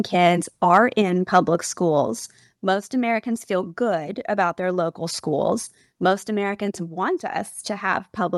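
From 0.74 to 0.77 s the speech peaks flatten into a harsh crackle, likely microphone overload: the input sits about 2 dB past the converter's limit, so the tops of a small share of the waveform are sheared off. Unlike codec distortion, the crackle appears only on the loudest moments. At 1.02 s voice and background drop together by about 4 dB in a single step. This is a microphone volume stepped down, likely the call software cutting input gain after that peak; unlike a fade, the change is instant. From 1.34 to 1.39 s a second, milder microphone overload returns, about 1 dB over, with the same brief clipped edge despite the lower gain. Throughout, the audio is band-limited near 12 kHz, which fits an Opus call path.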